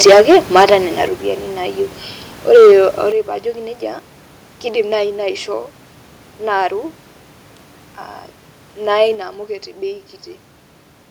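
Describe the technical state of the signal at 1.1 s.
A microphone volume step-down occurs at 1.08 s, where the speech and the room noise behind it drop together by 6 dB in a single abrupt step rather than a gradual fade. The likely cause is the call software judging the microphone input too hot and cutting the device's input volume in one move. Because the background, sitting about 23 dB under the speech, falls by the same amount, the change reads as a gain jump.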